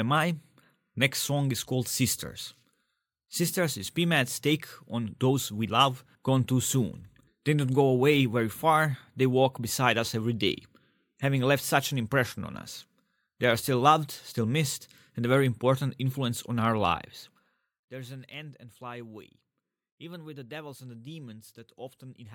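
No technical faults can be heard anywhere in this speech recording.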